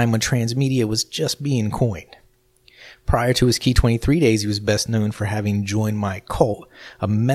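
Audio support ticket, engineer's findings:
No audible defects in the speech signal: level steady, no dropouts, no discontinuities, no timing irregularities; no fault components identified.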